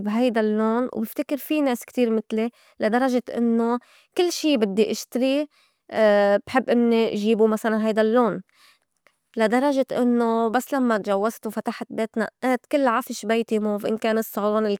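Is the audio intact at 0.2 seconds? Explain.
Yes, at 0.2 seconds the speech runs intact, with no dropout, distortion or other audible fault.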